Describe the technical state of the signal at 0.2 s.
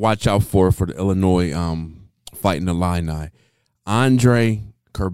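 At 0.2 s the speech signal is intact, with no audible fault at that moment.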